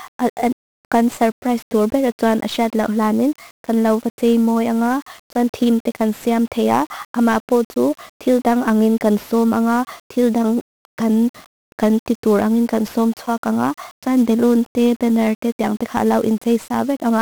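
Speech that sounds fuzzy and crackly throughout, treble buried in hiss: 1-bit DFPWM compression, heavily damaging, which fits a rate near 48 kbps, turns coarse steering into strong broadband noise.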